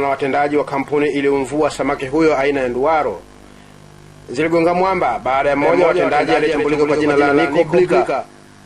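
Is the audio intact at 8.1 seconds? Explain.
No. A doubled audio track runs from 5.61 s to the end of the clip, so 8.1 s falls inside it. A second, full-band copy of the sound trails the original by about 150 ms at roughly 5 dB lower, likely from a slower capture path feeding the same signal into the mix again. It carries no reverberant tail or room colouring, just a clean repeat that kicks in abruptly, giving a distinct slapback smear to everything at that moment.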